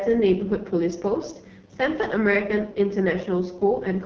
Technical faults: AMR wideband (HD Voice) codec

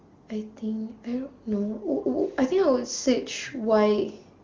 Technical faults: none

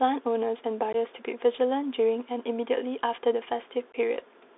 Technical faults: Bluetooth CVSD headset codec; unconcealed Bluetooth headset packet loss

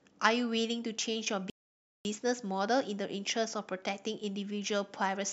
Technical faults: playback stall

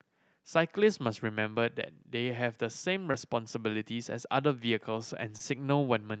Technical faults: short concealed packet loss

